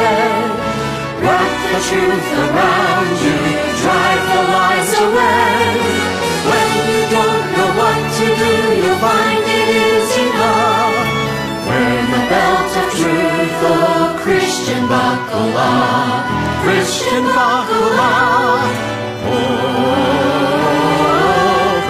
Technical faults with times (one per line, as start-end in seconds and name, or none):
16.58-16.62 compressed frames skipped